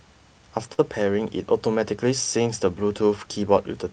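At 0.73 s the speech hangs for a moment in a short stall from a late packet, lasting until about 0.80 s. The next packet arrived late, so the jitter buffer ran dry and the receiver held the last sound for 46 ms, then picked up exactly where it had stopped. Nothing is lost, but the sound drags on with a faint buzz or dip. On a spectrogram the harmonics run flat and repetitive across that gap, and later events are shifted 46 ms later.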